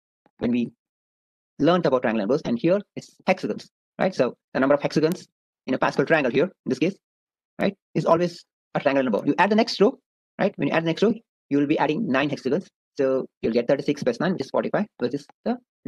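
A flipped bit in the stored or transmitted samples causes bit error spikes at 5.12 s, 7.61 s and 9.19 s, where one or two sample values jump by a power of two and snap back. Each is a sharp, broadband tick unrelated to the sound, peaking near about -5 dBFS first, then about -23 dBFS.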